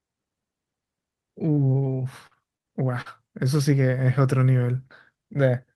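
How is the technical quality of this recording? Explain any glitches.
The speech comes through a call codec with its top end limited near 12 kHz, and two packet-loss glitches interrupt it.

At 1.55 to 1.59 s there is a brief smear or wobble: short concealed packet loss, where about 20 ms of audio arrived too late and the receiver extended the preceding sound to cover it.

From 2.27 to 3.08 s the speech turns choppy with pieces missing: repeated packet loss, with four separate gaps (the longest 42 ms) each patched by continuation, so roughly a fifth of that stretch is synthesized fill.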